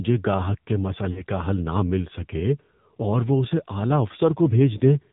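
The whole clip runs through the AMR narrowband mobile codec, so it's phone-band speech with nothing above 4 kHz, and the damage is easy to hear. The voice has that buzzy, synthetic edge you get when the codec rebuilds speech from a vocal tract model and a few excitation pulses on a tight bit budget. That sounds like one of the lower AMR-NB modes, something around 7.4 kbps.

There are also lost AMR speech frames. The first run is from 1.12 to 1.23 s, right after "گاہک کے" and before "کا حل نہ مل". About 40 ms of signal is missing, which fits two 20 ms frames failing. The decoder covers the gap by repeating the last good pitch and spectral shape at a falling level, so the sound smears and sags before the voice comes back a bit rough. A second, shorter dropout from 4.78 to 4.82 s fits a single lost frame and comes through as a brief dip or warble.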